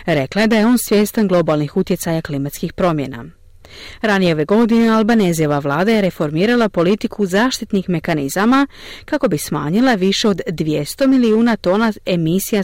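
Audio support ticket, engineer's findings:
Hard clipping throughout the speech, driven about 8 dB past a gain stage's limit; a few percent of samples flattened. Waveform shows squared-off tops; spectrogram shows added upper harmonics on louder syllables.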